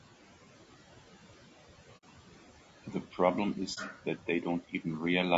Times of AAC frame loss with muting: 1.97-2.04, 3.74-3.78

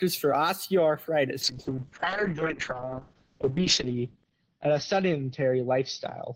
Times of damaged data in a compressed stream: none

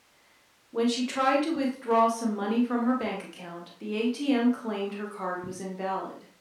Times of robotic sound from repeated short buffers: none

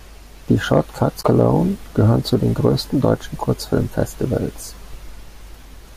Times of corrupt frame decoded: none

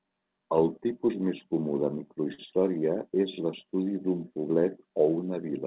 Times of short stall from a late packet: 2.34-2.40

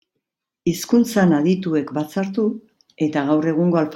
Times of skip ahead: none

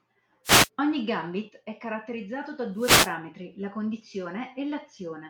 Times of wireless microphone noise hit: 0.44-0.69, 2.75-3.16

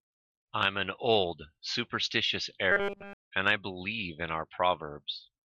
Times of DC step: none

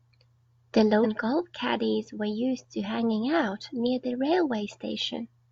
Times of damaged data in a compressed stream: 1.00-1.06

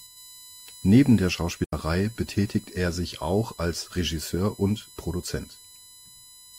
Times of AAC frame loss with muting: 1.64-1.73

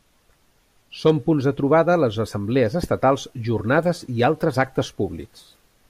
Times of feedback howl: none

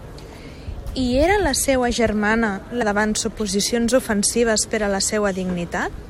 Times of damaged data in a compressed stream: 2.81, 5.93-5.95

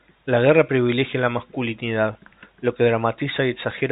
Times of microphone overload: none

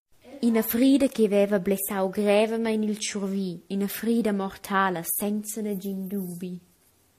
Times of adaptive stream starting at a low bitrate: 0.00-5.69

